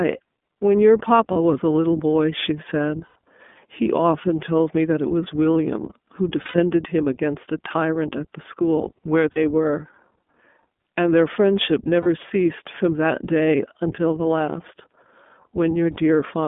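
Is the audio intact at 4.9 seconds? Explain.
No. At 4.9 seconds the speech carries iLBC codec damage, as it does for the whole clip. The codec rebuilds each short frame's excitation on its own, with a frame rhythm that fits 20 ms at roughly 15.2 kbps, so the voice sounds plainly rough and synthetic and thin. On a spectrogram, energy stops sharply at 3.5 kHz and is largely missing below 200 Hz, and the harmonics look grainy rather than smooth.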